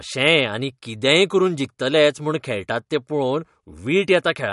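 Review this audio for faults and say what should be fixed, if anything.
MP3 compression artefacts run through the whole speech clip: nothing sounds above 11.2 kHz, and there is a plainly audible watery swirl. This is likely from an encoder short of bits zeroing weak frequency lines frame to frame, consistent with a low bitrate around 48 kbps. To prevent it, keep a lossless master and, if MP3 is required, encode at 128 kbps or higher.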